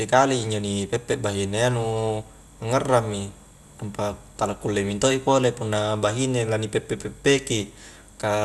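MP2 compression runs throughout this speech clip: nothing survives above 12.1 kHz, and the remaining sub-bands sound coarse and gurgling, likely from MPEG Layer II coding at a bitrate around 80 kbps.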